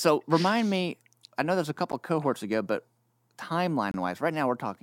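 At 1.92 s the speech drops out for about 11 ms, and from 3.91 to 3.94 s it drops out again for about 27 ms. Both are gaps between stream segments. The timestamps of adjacent 2-second segments fail to meet, so the player fills the missing span with silence. Each hole has abrupt edges, heard as a brief click-like break. The two gaps fall roughly two seconds apart, at the segment boundaries. No audio is lost, but the timeline is stretched.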